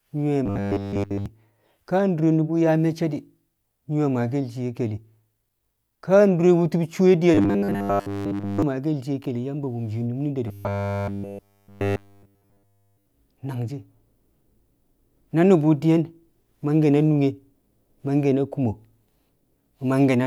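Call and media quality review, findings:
Robotic sound from repeated short buffers at 0.46–1.26 s, 7.35–8.63 s (right after "ka dure wu̱tu̱b cuwe") and 10.48–13.06 s. Steady 100 Hz metallic buzz, so a 10 ms chunk looping with essentially nothing new getting through. Likely jitter buffer starved and covering the gaps.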